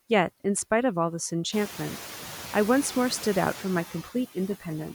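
A speech recording with mild noise suppressor artifacts throughout. The suppressor estimates which frequency bands hold steady noise and pulls them down frame by frame, but here it removes only about 2 dB, so the background is barely reduced and its level shifts as speech starts and stops. On a spectrogram the noise floor between phrases looks faintly patchy in time and frequency rather than smooth. The room noise itself jumps by about 15 dB at around a second and a half and then sits about 16 dB below the speech. In the waveform this shows as a thicker baseline from that point on.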